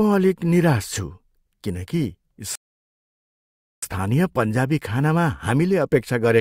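At 2.55 s, right after "किन कि", the speech stops dead and silence takes over. This is a rebuffering stall. The player used up the audio it had already downloaded and had to wait for more to arrive. The gap lasts until 3.83 s, adding about 1.27 s of dead air. Then playback picks up exactly where it left off, with "पन्जाबी खानामा". No speech is lost. The sentence is simply held in mid-flow.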